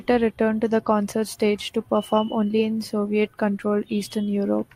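No technical faults can be heard at any point in the speech. There is nothing to place on a timeline or to describe as going wrong.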